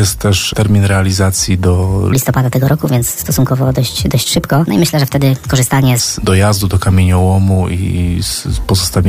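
From 2.13 s to 6.00 s the audio suddenly turns high and hurried, then drops back to its normal pitch and pace. This is a section at the wrong speed: it runs 1.4 times faster than it was recorded, so pitch and tempo rise together, by about five semitones. The likely cause is that this stretch was played back or edited against the wrong clock, which shortens its timing and raises everything in it at once.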